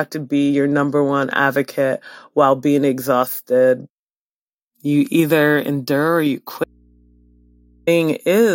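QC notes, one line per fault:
6.64–7.87 s: audio dropout to a faint residue; speech cuts out abruptly for 1.23 s, leaving mains hum about 35 dB down, likely from an open but live input.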